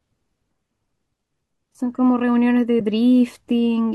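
AAC frame loss with muting at 2.80 s: the decoder zeroed the spectrum for a missing stretch of this speech, which fits a single lost low-delay frame of about 10 ms, likely from AAC-ELD coding. Overlapping windows fade the sound out and back in, leaving a brief, soft-edged gap.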